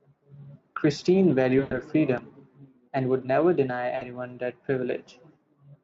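A speech recording carried over a Speex VoIP link, whose coding itself leaves little audible damage, has two gaps covered by packet loss concealment from the speech codec. From 1.59 to 1.80 s, roughly 120 ms of audio is missing, consistent with about six lost 20 ms frames. From 3.95 to 4.03 s, roughly 60 ms is missing. In each gap the decoder extends its last pitch and filter state with falling gain, so the sound smears into a fading buzzy tone or coloured noise, and the speech stays briefly weakened as it resumes.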